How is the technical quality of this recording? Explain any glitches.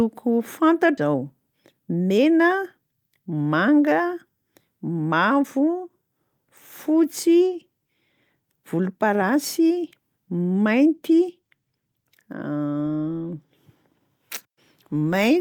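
There are two playback glitches close together near the start, both in how the audio was delivered and buffered.

At 0.97 to 0.99 s there's a skip ahead: about a second of audio was dropped while later packets were already queued, so playback leaps forward with no gap filled in and the two sides butt right against each other, giving an abrupt jump in the speech.

Right after, from 1.07 to 2.18 s, there's a jitter buffer speed-up. The buffer was holding more than it wanted, so it trimmed tiny pitch-period slices over and over, removing about a tenth of a second. The speech runs at roughly 108% speed with unchanged pitch and sounds a touch rushed.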